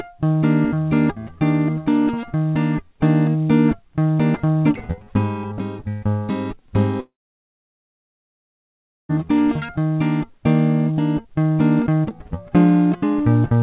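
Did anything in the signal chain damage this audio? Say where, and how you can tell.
Yes, at the network stage: a long network dropout, running from 7.0 s to 9.11 s in the music. The last sound is carried on briefly as a fading buzz, then roughly 2 s of near silence follows before the music resumes further along, with about 2.1 s of material missing. That decaying concealment tail, rather than a clean cut or a brief click, sets it apart from an edit or short packet loss. The likely cause is packets failing to arrive through the G.711 call path, whose 4 kHz ceiling is audible throughout.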